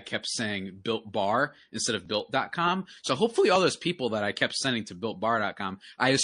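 Throughout, the sound points to plainly audible MP3 compression, likely near 40 kbps, which drops weak frequency lines, so the speech sounds watery and swirly with chirpy s sounds. From 2.07 to 2.09 s, just after "built bar instead of", pre-echo occurs: a long 52 ms block spreads quantisation noise ahead of a sharp attack, so a hiss about 12 dB up precedes it and smears it.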